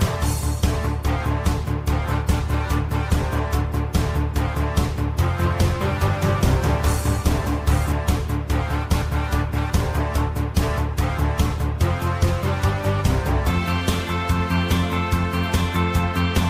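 From 5.44 to 7.92 s a doubled audio track appears: a second full-band copy of the sound trails the original by about 0.7 seconds, roughly 5 dB quieter, with no decay or added room colour. It most likely comes from the audio being captured again through a slower path. It cuts in and out abruptly. On a spectrogram every feature in that span is repeated, shifted right by the delay, and the waveform shows stacked, overlapping envelopes with hard edges.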